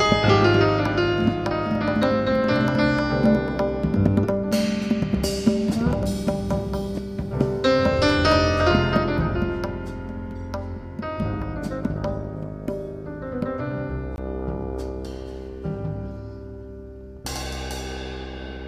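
At 14.16 to 14.18 s there is a block of digital silence lasting 20 ms. The sound cuts out abruptly and returns with no fade, heard as a short hole. A block of zeros replaced the audio, either from an output buffer not filled in time or from a calculation producing invalid values.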